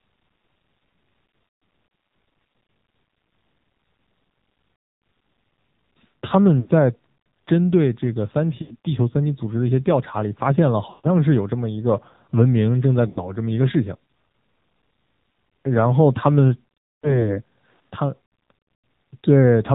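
Throughout, the speech carries the AMR narrowband mobile codec sound: buzzy, synthetic voicing with nothing above 4 kHz, which fits a low 7.4 kbps mode. On a spectrogram, energy stops at a hard ceiling at 4 kHz, and harmonics look smeared.

Lost AMR speech frames occur at 1.48–1.62, 4.76–5.02, 6.60–6.69, 8.62–8.76, 10.90–11.06, 13.08–13.32, 16.95–17.32 and 18.74–18.84 s. The decoder repeats the last good settings with falling gain, so each drawn-out stretch fades away, showing as smeared, flattened bands tapering in the waveform before speech returns weakly.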